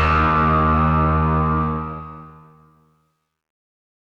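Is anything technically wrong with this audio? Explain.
Yes. From 1.61 s to the end at 4.03 s, the fade-out shows truncation distortion on a fade. The gain stage appears to keep too few bits and adds no dither, which fits an 11-bit word length. As the level drops toward the smallest step, the waveform collapses into coarse square steps. From 2.63 s to 4.03 s the tail turns gritty.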